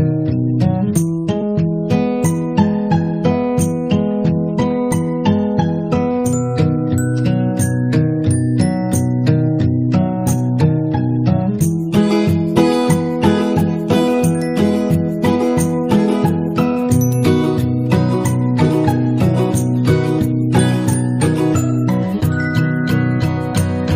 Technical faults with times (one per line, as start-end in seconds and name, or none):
1.41 compressed frames skipped
12.55 compressed frames skipped
18.68 compressed frames skipped